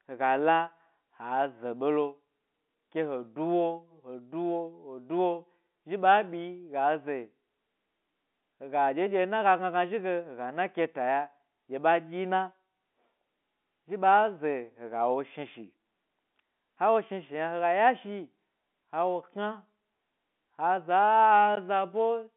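At 21.56 s a brief tick interrupts the speech, a 15 ms block of digital silence with hard edges. The output buffer was likely not filled in time, so zeros replaced the samples. The telephone-band G.711 coding runs underneath throughout.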